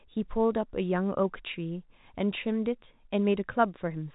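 Nothing faulty can be heard in this telephone speech.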